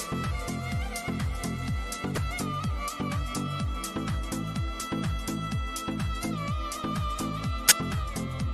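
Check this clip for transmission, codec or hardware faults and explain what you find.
Two short bursts of corrupt frame decoded turn up, at 2.15 to 2.18 s and at 7.66 to 7.72 s, the second louder. In each, a couple of damaged compressed frames were decoded anyway, so misread gains and codes placed energy at wrong frequencies, heard as a brief chirpy blip of noise lasting about two frames' length. Unlike a dropout or concealed packet loss, foreign sound is added.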